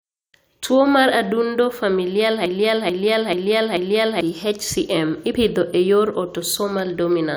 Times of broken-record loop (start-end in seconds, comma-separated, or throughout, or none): 2.46-4.21